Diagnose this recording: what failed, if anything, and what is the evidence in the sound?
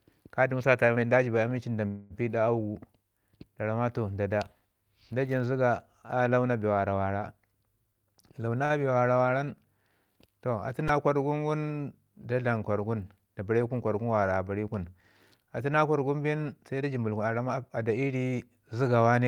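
Right after "jibayi ami li nda", from 1.87 to 2.13 s, there's a call audio freeze: the last sound is smeared into a fading buzz for about a quarter second, then speech resumes where it left off. That points to the network stage, likely packets held up in transit draining the jitter buffer, so delay grew with nothing lost.

The jitter buffer speed-up shows twice, at 8.03 to 8.59 s running 120% fast and at 16.81 to 18.15 s at 113%. Speech sounds hurried at unchanged pitch. The receiver is trimming pitch-period slices, roughly a tenth of a second and then about 0.2 s, to shed excess buffered delay.

Right after the first speed-up, 8.65 to 8.73 s has a short stall from a late packet: one sound is held about 47 ms too long with a faint buzzy dip. That's still network and jitter buffer. The buffer ran dry, the receiver stretched the last sound, and continued once the packet landed.

Two repeated buffer events sit at the device end, in the driver or buffer stage. 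At 10.88 s a tiny chunk plays four extra times as a brief buzz, costing about 10 ms of audio. At 15.00 s, just before "atu na kwargun bin", one extra play makes a click. The ~2.9 ms repeat fits a 128-sample buffer replayed when fresh data was late.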